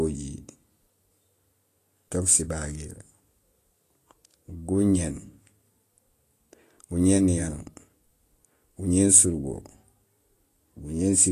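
From start to finish the speech carries Vorbis compression damage, likely from a low-bitrate encode near 35 kbps. Treble is quantised into grainy hiss, consonant attacks blur, and a spectrogram shows a flat wall with nothing above 14.1 kHz, plus speckled, noise-like texture below it.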